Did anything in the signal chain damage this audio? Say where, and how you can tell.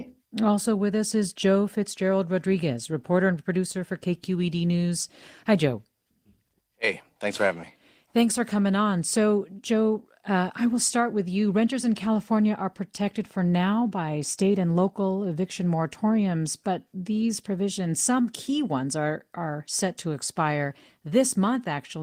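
No, nothing in this speech stood out as damaged by any stage of the signal chain on listening.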